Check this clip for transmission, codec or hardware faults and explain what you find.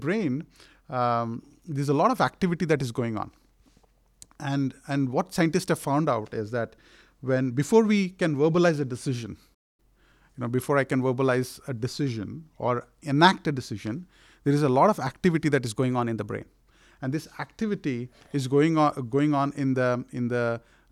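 Two kinds of fault affect this speech clip: one playback stall and two drift correction steps.

Playback stall, 9.54 to 9.80 s: right after "can verbalize a decision", the sound drops out for about 0.24 s and then resumes. This is likely a player that ran short of buffered data or had its output thread blocked.

Drift correction steps, 12.08 to 12.68 s and 15.76 to 16.46 s: likely clock-matching software abruptly changing the playback rate to manage its buffer. After "I can verbalize a", the audio slows by about 5.8% and drops roughly a semitone (about 103 cents) before snapping back ahead of "enact a decision there". After "of activity that is", it speeds up by 5.8% and rises about 97 cents.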